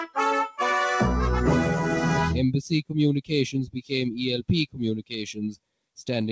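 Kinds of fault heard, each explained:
noise suppressor applied to music or sounds: A noise suppressor meant for speech stays on across the whole clip. It treats steady, held parts of the sound and any ambience as noise and turns them down, while sharp onsets mostly get through. The result is a level that keeps swinging by roughly 5 dB, heard as pumping or fluttering. This differs from the 8 kHz ceiling of the call path, which dulls the tone evenly rather than moving the level up and down.
sound cut by the noise suppressor: From 3.67 to 3.91 s the suppressor takes one stretch of sound for noise and pushes it down far more than the rest of the clip, by up to about 16 dB, over roughly 200 ms in total. Unlike the ongoing swing, this is a single, much deeper dip. Unlike a dropout, the sound does not vanish. It sinks in level and comes back once the suppressor lets go.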